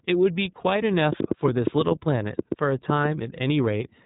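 Speech that has passed through the iLBC codec for its whole length, with a train of clicks laid over the middle of it. The iLBC coding cuts everything above about 3.8 kHz, so the audio is narrowband. Unlike plain telephone-band filtering, it also gives the speech a plainly audible rough, slightly synthetic grain. That grain comes from each short frame's excitation being coded on its own. The roughness fits 20 ms frames and the 15.2 kbps mode. From 1.13 s to 3.06 s roughly ten near-identical clicks tick through the sound at an uneven pace, averaging about 5.7 per second and peaking at about 15 dB above the signal. They continue through pauses and do not follow the codec's regular frame timing, which separates them from coding artefacts. The likely cause is electrical interference or a faulty connection or power supply injecting pulses.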